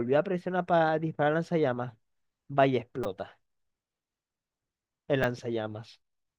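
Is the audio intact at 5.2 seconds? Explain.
No. At about 5.23 s the speech is interrupted by a repeated buffer. New audio failed to arrive in time, so the playback device replayed the last short block twice more, sounding three times in all with a hard join at each repeat. The repeat period fits a buffer of about 5 ms, so the stutter is heard as a brief click or buzz. Roughly 10 ms of the original audio is lost.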